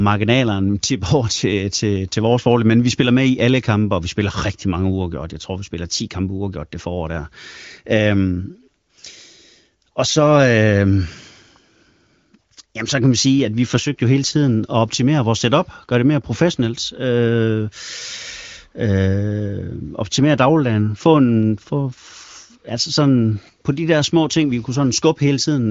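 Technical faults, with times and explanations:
No technical faults are present; the speech carries the band-limited sound of the AMR wideband (HD Voice) codec at a high rate, which fits its 23.05 kbit/s mode, with nothing above 7.5 kHz.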